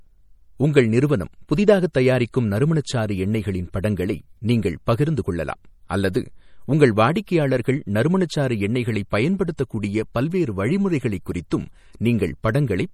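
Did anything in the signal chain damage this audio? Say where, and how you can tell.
Yes, at the codec stage. The whole clip has plainly audible MP3 compression damage: watery, swirly texture on the speech and smeared attacks, though content still reaches about 20.2 kHz. That points to a starved encoder, likely MP3 at something like 48 kbps, dropping weak spectral lines frame to frame.

There's also pre-echo at 1.93 s and 11.50 s, a short hiss smearing ahead of sharp onsets by about 18 ms and 12 ms. The codec spread quantisation noise across each block, so it leaked into the quiet moment before the attack.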